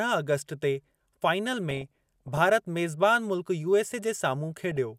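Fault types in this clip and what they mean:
DAB burbling: weak-reception bit errors slip past error correction into the MP2 data, making single sub-bands jump in level frame by frame. The speech burbles from 1.71 to 2.38 s, just after "ते फाइनल", then briefly burbles again at 4.71 to 4.77 s.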